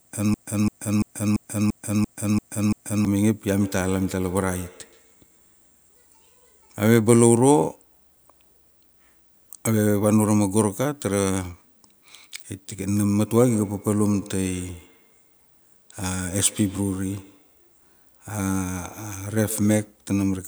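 The clip opens mid-fault: a broken-record loop is already under way and runs to 3.05 s, with a 0.34 s slice of speech replayed eight times, back to back and identical. This likely comes from a player or stream stalling and resending its last buffered fragment, so whatever should have played there is gone. Unlike an echo, nothing fades or changes between repeats, and no new speech gets through underneath.

From 3.61 to 6.15 s, and again from 13.25 to 20.03 s, there is feedback echo between two devices. The speech moves forward normally, but each sound returns at a fixed interval of roughly 150 ms, peaking at about 22 dB and then about 20 dB below the speech. This is another device in the room replaying the call into the microphone. Each pass comes back thinner and more ringing, which tells it apart from the loop's exact copies.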